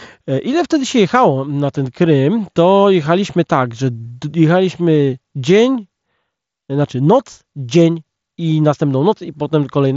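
No technical faults can be heard in this speech.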